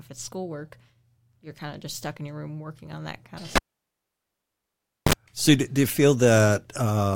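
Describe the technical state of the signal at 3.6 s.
At 3.6 s the signal is inside a cable pulled and plugged in event running from 3.56 to 5.13 s. A live cable is disconnected, giving a pop, then about 1.53 s of near silence with the speech path broken. While only the plug tip touches during reinsertion, roughly 40 ms of 50 Hz mains buzz leaks in. A second pop follows as the full connection restores the speech.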